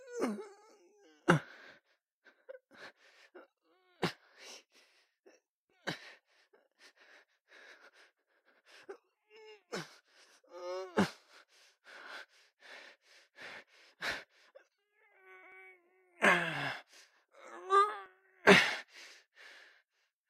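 At 15.52, 17.04 and 18.06 s the sound jumps, each time skipping ahead rather than pausing: about 70 ms gone at the first, roughly 20 ms at the other two. That's likely a dropped buffer (overrun), with samples overwritten before being read.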